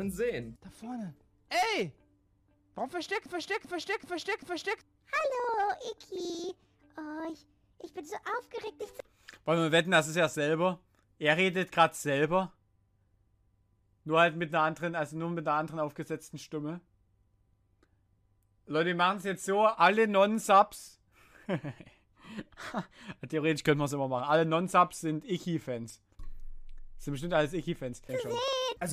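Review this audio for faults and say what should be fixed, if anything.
From 3.26 s to 4.81 s the audio sticks: a fragment about 0.39 s long plays four times back to back, with identical repeats, so the passage stutters like a broken record before normal playback resumes. This broken-record loop likely comes from the player, encoder or stream stalling and re-sending the last fragment it held, which means the sound that belonged in those 1.56 s is gone. To prevent it, detect stalls in the playback or encoding chain and output silence or drop the gap instead of repeating stale buffer contents.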